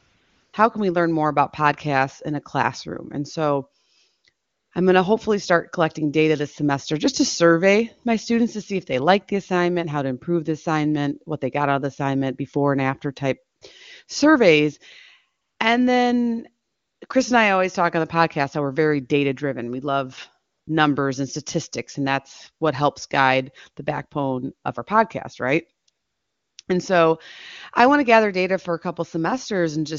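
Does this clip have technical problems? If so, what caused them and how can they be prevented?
Yes. Between 0 and 26.7 s the real background keeps dropping out and being replaced by a smooth, steady hiss that switches in and out. The gaps range from about 20 ms to 680 ms, and the longest starts at 25.89 s. This is AMR comfort noise. The phone decided no one was talking, so it stopped sending speech frames. The receiving end then filled each pause with synthetic noise built from a coarse description of the background's level and spectrum. The wideband speech between these pauses comes through cleanly. To prevent this, disable discontinuous transmission, or make voice activity detection less aggressive so that pauses and quiet endings keep being sent as real audio.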